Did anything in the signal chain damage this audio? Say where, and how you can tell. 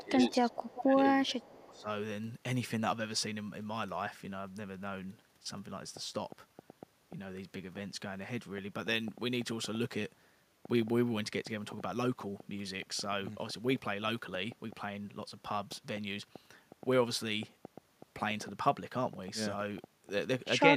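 Yes. In the opening two seconds the sound dips in three places: 0.00 to 0.47 s, 0.80 to 1.07 s and 1.27 to 1.88 s, sinking by about 15, 15 and then 20 dB. This points to call processing, most likely speech suppressed in double talk. The canceller heard both ends active and attenuated the near talker along with the echo. Unlike packet loss, the level is ducked rather than cut to silence or replaced, and it follows the overlap.

Overlapping those dips is an echo leak. A faint delayed copy of the audio sits 387 ms behind the original at 0.33 to 0.82 s, 1.26 to 1.48 s and 1.73 to 1.81 s. It is about 15 dB below the speech at first, then about 30 and 35 dB down. The likely cause is a loudspeaker path whose echo canceller left residue. A fixed, long delay like this separates it from room reverberation, which would smear continuously rather than repeat discretely.

From 5.97 s to 20.48 s a train of clicks ticks over everything, pauses included. 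There are roughly 70 pops at about 4.3 per second, spaced unevenly, with peaks about 5 dB above the signal. They are much alike in shape and ignore the speech, so they likely come from interference in the analogue wiring or a struggling interface, not from codec errors, which would track the content and smear rather than snap.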